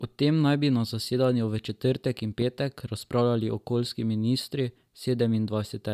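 A speech recording with one loud pop from 2.42 to 2.44 s, a single sharp transient peaking roughly 5 dB above the speech, which continues underneath it. The likely cause is a voltage spike from a plug, switch, static discharge or driver glitch.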